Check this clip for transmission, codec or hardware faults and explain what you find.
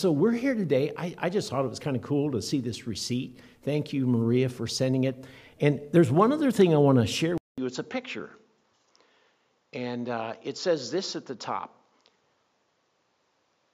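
There's one fault, and it runs from 7.38 s to the end. The input was likely switched to a poorer device: after a 200 ms gap the audio loses everything above 7.3 kHz, drops about 5 dB, and picks up a faint new background noise, so it sounds duller and boxier.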